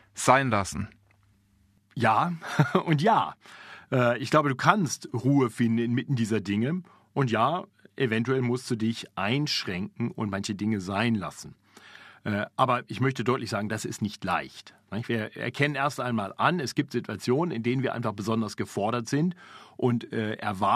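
No technical faults can be heard in this recording.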